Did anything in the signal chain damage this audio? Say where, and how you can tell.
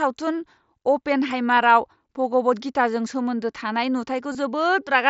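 Yes. Concealed Bluetooth headset packet loss on the wireless link to the mSBC codec: at 1.56 s, just before "भगवद गीताजों सोमोन्दो", and again from 4.32 to 4.35 s, the waveform is patched with repeated recent material. The gaps of 15 ms and 22.5 ms fit two and three lost mSBC frames.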